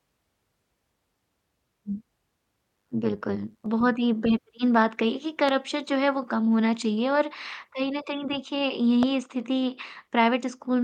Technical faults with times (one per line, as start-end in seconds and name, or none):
2.76-3.66 overlap-add ripple
5.49-5.51 loud pop
9.03-9.05 loud pop